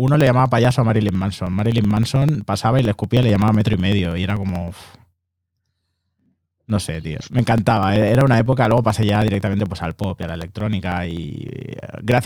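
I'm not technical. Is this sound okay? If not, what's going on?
No. From 0.08 s to about 12.18 s there are periodic USB or driver dropouts: every 0.063 s, about sixteen times a second, something on the computer briefly stalls the audio connection and roughly a millisecond of sound is skipped. Each gap makes a tick, around two hundred in all. Unlike random crackle from a bad cable, these ticks keep a steady, machine-like rhythm and are heard only while there is signal to interrupt.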